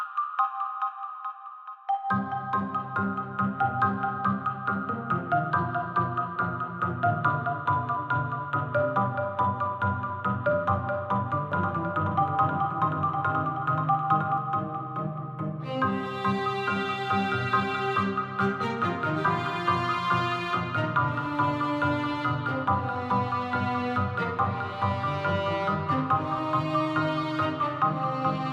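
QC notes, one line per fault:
11.52–14.38 s, doubled audio track: a second capture path, likely slower, mixes in a dry copy about one second late and roughly 5 dB quieter, cutting in and out abruptly.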